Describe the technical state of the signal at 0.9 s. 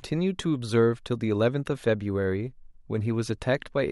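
At 0.9 s the speech signal is intact, with no audible fault at that moment.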